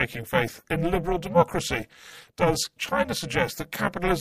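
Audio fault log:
Throughout, overlap-add ripple: the speech has a harsh, metallic buzz, its level swinging by about 60 dB roughly 300 times a second. The audio was split into windowed frames and rejoined with overlaps that don't sum evenly, so loudness dips once every frame.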